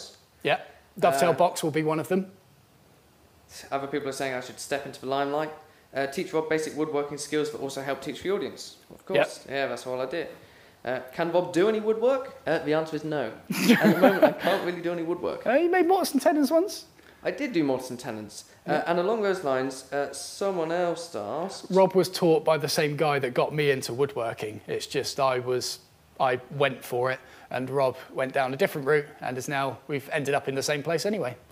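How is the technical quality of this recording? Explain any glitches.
Nothing here glitches or trips up at any point, so the recording holds together nicely the whole way through.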